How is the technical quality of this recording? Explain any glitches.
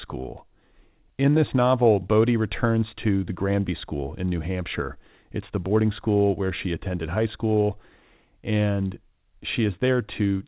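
No glitches are audible anywhere in the recording; the speech comes through a call path using G.711 mu-law coding at 64 kbps, so nothing is present above 4 kHz, which is the normal bandwidth for that codec.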